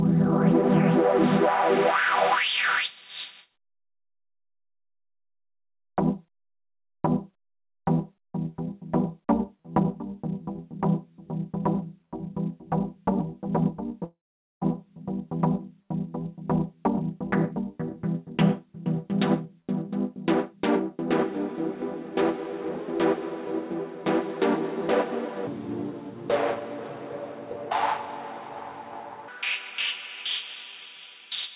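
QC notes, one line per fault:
14.04–14.63 s, long network dropout: the sound breaks off, a fading continuation of the last sound fills the gap and then gives way to about 0.46 s of silence. Audio resumes with 0.58 s missing, likely from packets that never arrived. Nothing is stretched to cover the loss.
25.47–29.28 s, section at the wrong speed: this stretch plays at 0.585 times its proper speed, dragging and sitting about ten semitones lower, likely from playback against the wrong clock. Tempo and pitch fall together, which rules out a pitch shift alone.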